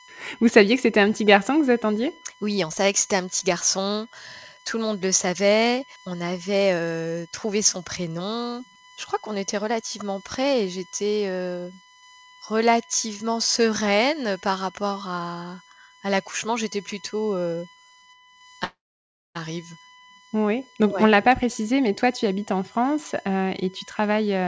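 Speech carrying a steady USB whine at 1 kHz, roughly 25 dB below the voice, drawn as a thin unbroken horizontal line at 1 kHz across the whole spectrogram. From 18.64 to 19.37 s the sound smears into a fading buzz, then about 0.6 s of silence, a flat gap in the waveform, most likely a long network dropout. The spectrogram also shows the call path's clean ceiling at 8 kHz, consistent with G.722.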